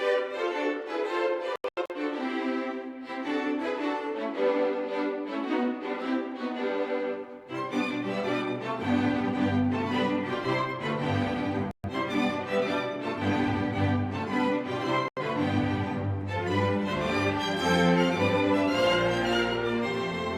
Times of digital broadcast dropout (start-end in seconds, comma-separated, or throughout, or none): 1.56-1.93, 11.71-11.89, 15.08-15.21